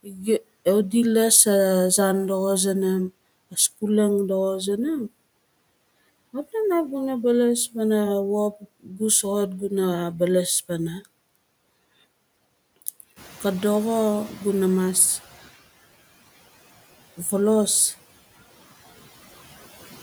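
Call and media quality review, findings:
Speech cut by the noise suppressor, 0.03–0.43 s (about 18 dB down, roughly 0.3 s affected) and 8.83–9.0 s (about 12 dB). Sound swallowed as noise. Waveform envelope notched, spectrogram consonant energy faded.

Noise suppressor catching up, 13.16–15.48 s. Room noise jumps about 10 dB near 13 s; estimate lags, then adapts over 2.32 s to about 12 dB cut. Spectrogram broadband floor brightens, then fades.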